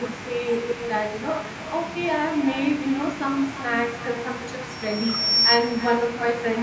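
Echo with no canceller runs through the whole speech clip. The far end's loudspeaker is picked up by its own microphone and returned unremoved, so every phrase is shadowed roughly a third of a second later by a thinner copy about 11 dB quieter.

A loudspeaker feedback squeal sounds from 4.70 to 5.63 s. A microphone picks up the speaker it feeds, and the loop gain passes unity at 5.5 kHz. That single tone swells over roughly 0.7 s to around 10 dB above the speech, a piercing whistle well inside the call's 8 kHz band limit.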